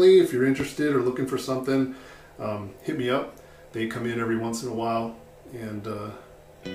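A single loud pop lands at 0.60 to 0.63 s, a sharp thump standing roughly 10 dB above the surrounding sound, which carries on unbroken beneath it. The likely cause is a sudden voltage step or pulse from a plug, switch, static discharge or driver glitch, shaped by the circuitry downstream into a brief thump. Unlike a dropout click, nothing is missing from the audio: the pop is added on top, with no gap or skip in the material.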